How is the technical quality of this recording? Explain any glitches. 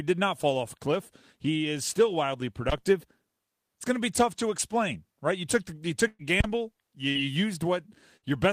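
The speech is marred by two kinds of glitch: two low thumps and three short dropouts.

Phantom power thump at 2.69 to 2.94 s and again at 6.40 to 6.73 s: a supply switching on or off on the live input sends a voltage step through the coupling capacitors, heard as a deep thud dying away in about 56 ms and 73 ms respectively.

Burst of packet loss at 6.07 to 6.22 s, 7.09 to 7.18 s and 8.17 to 8.25 s: consecutive packets failed to arrive, so the receiver stretched the last sound, fading it for 115, 58 and 54 ms, with a brief 10 ms silence in the first. Speech then resumes with 120, 60 and 60 ms missing.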